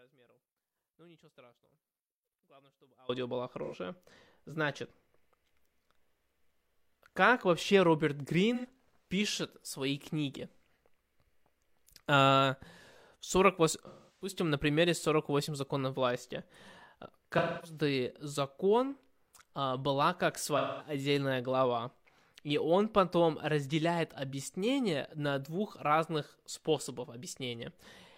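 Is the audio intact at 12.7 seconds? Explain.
Yes, the speech at 12.7 seconds plays through intact, with no dropout, click or other break in the sound at that moment.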